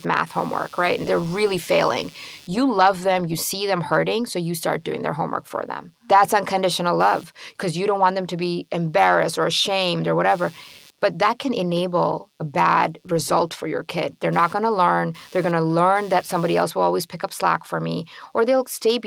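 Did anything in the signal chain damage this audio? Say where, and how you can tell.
Yes: computer activity noise enters in the analogue wiring throughout the speech. A buzzy chirping pulses at around 150 Hz, roughly 30 dB below the speech. Processor and graphics load currents modulate the shared ground. A spectrogram shows evenly spaced vertical striations independent of the speech.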